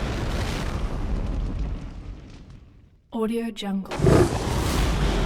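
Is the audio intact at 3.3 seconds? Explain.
Yes, at 3.3 seconds the audio plays through intact, with no dropout, click, distortion or other fault audible at that point.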